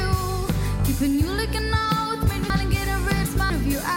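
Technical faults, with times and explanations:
2.5–3.5 s, chunks out of order: one 250 ms chunk plays three chunks late, after the segments meant to follow it, so the sound briefly jumbles, with three hard joins. Unlike a dropout or repeat, nothing goes missing or plays twice; it is only reordered.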